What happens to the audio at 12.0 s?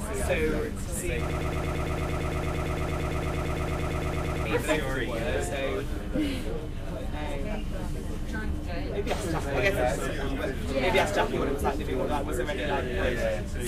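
Nothing goes wrong at 12.0 s; the audio plays through that moment intact, with no dropout, click or distortion.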